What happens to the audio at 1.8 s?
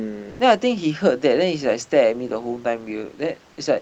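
At 1.81 s there is a single sharp click. It is most likely dropped samples. A tiny fraction of a millisecond of the stream goes missing, so the waveform jumps abruptly to a later value. Nothing audible is lost, only that brief tick.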